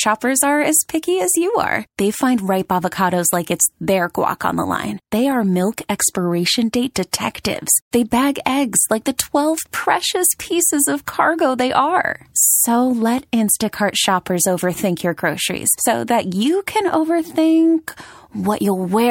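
Pre-echo softens speech attacks at 7.11, 7.43, 7.91, 8.45, 9.18, 9.72 and 11.06 s. In each, a hiss about 10 to 22 dB above the preceding quiet leads the onset by 11 to 18 ms, which fits a 26 ms transform window that never switches to short blocks. Unlike a click, it comes before the attack and blurs it.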